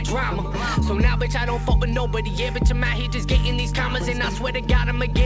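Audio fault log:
No faults logged; the audio came over a WebRTC call path, and the absence of anything above 8 kHz fits a wideband G.722 link at 64 kbps working as designed.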